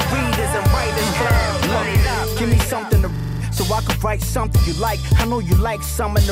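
A system hang loop occurs at 3.16 to 3.41 s: playback froze while the hardware kept replaying one ring buffer of about 42.7 ms, consistent with a 2048-sample buffer. The slice repeats six times at 23.4 Hz, a machine-gun stutter, and about a third of a second of audio is lost.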